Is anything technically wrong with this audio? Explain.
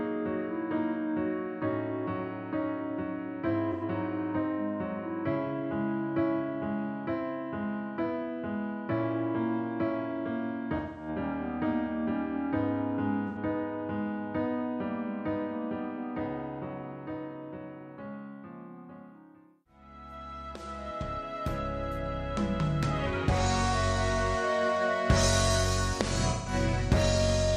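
Yes. AAC frame loss with concealment occurs four times: 3.72–3.83 s, 10.76–11.08 s, 13.28–13.36 s and 26.29–26.53 s. Lost frames are rebuilt from the last good spectrum, so each gap is covered by a short smeared, noisy or phasey patch.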